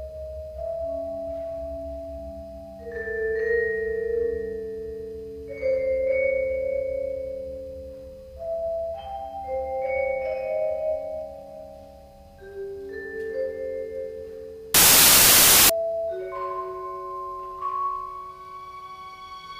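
Samples built from the wrong bytes hit the audio from 14.74 to 15.70 s. The sample bytes are assembled out of step, so the rapidly varying low bits land in the most significant position, and the sound turns into loud, harsh broadband noise for just under a second.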